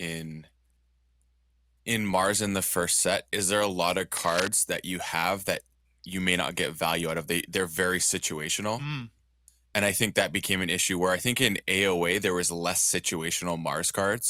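Scratchy rustling nearly as loud as the speech, 4.17 to 4.48 s after "there a lot of": cable scratch noise, likely a worn connector shifting.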